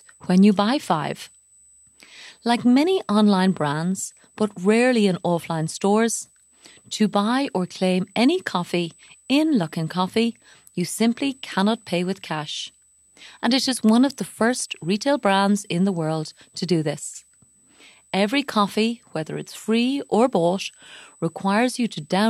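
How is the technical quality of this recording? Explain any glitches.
The speech carries one steady fault throughout: USB whine. A fixed high tone sits at 8 kHz, roughly 35 dB below the speech, from start to finish. The bus's 125-microsecond microframe current pulses leak through power or ground. On a spectrogram it shows as a thin unbroken horizontal line at 8 kHz.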